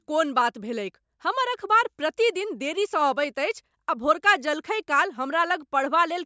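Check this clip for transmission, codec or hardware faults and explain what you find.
Nothing in the speech stood out as a fault on listening.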